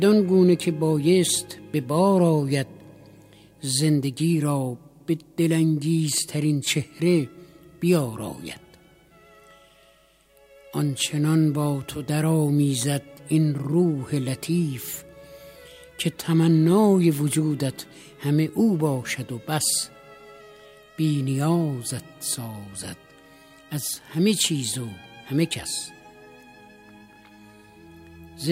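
No technical faults are audible.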